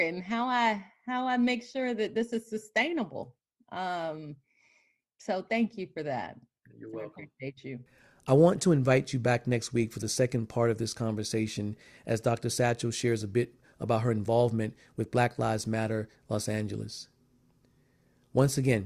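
A speech recording with no technical faults audible anywhere in the signal.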